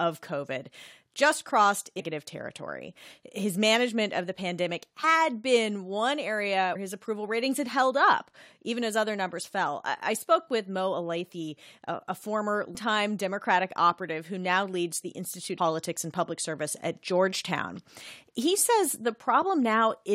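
Compressed frames skipped: the decoder drops runs of whole frames, consistent with roughly 23 ms frames, at 1.99–2.01, 5.03, 6.75–6.77, 12.74 and 15.57 s. Each time, the speech jumps ahead by roughly 150 to 400 milliseconds, after "just crossed" and "been one area".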